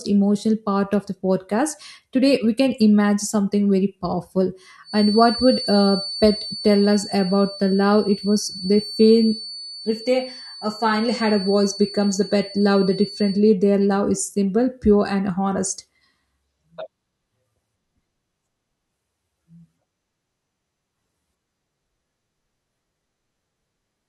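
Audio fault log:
4.82–13.44 s, feedback whistle: just after "something very powerful", a thin, steady tone at 4.5 kHz sits behind the speech, roughly 15 dB below it, swelling and fading slowly in level. The likely cause is a loudspeaker-to-microphone loop held right at the edge of feedback, so this one frequency keeps ringing without building up. On a spectrogram it shows as a single unbroken horizontal line at 4.5 kHz across those 8.6 seconds.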